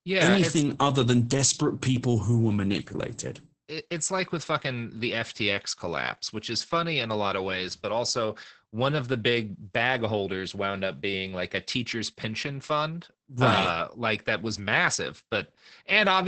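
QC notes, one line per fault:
Throughout, Opus voice compression: speech sounds muffled, hoarse and faintly robotic, with nothing above 8.7 kHz. That fits Opus's SILK voice coder at around 10 kbps, limiting the band to wideband and coding the excitation coarsely, so detail smears heavily.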